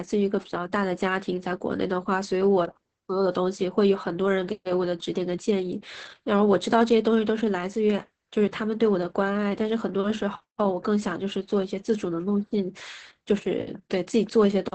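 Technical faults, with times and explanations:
Throughout, Opus voice compression: the speech sounds muffled and hoarse, with a slightly robotic, buzzy edge and nothing above about 8.5 kHz, so sibilants and breath lose their crispness. The band limit points to wideband SILK coding, the linear-prediction mode, and the heavy damage suggests a bitrate near 10 kbps. At that rate the excitation signal is quantised so coarsely in each short frame that the natural roughness of the voice becomes a synthetic texture.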